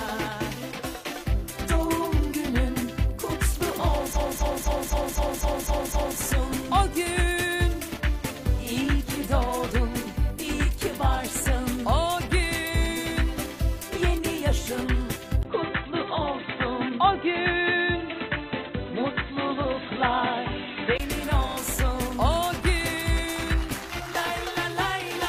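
A stretch of compressed frames was played back repeatedly from 4.12 to 6.18 s, with the same 256 ms block sounding eight extra times and adding about 2.05 s as a stutter. A single 42.7 ms block repeats once at 21.48 to 21.54 s. From 15.43 to 21.00 s the input was likely switched to a poorer device. After a 20 ms gap at the switch, the audio turns dull with nothing above 4 kHz and a faint new noise floor, at much the same level.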